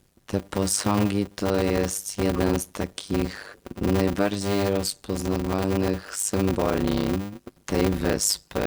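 A steady buzz at 100 Hz runs under the whole speech, which plays at 0.533 times its normal speed with its pitch about unchanged. This is a block size mismatch (padded): shorter blocks, which fits 256 samples, are read into larger ones, and the remainder is filled with silence.

From 2.36 to 2.41 s, between "te posągi to jest" and "z takich najbardziej rozpoznawalnych", a brief glitch of misplaced energy appears. A corrupt frame decoded is the cause. Damaged bits in a couple of compressed frames were played anyway, putting energy at the wrong frequencies.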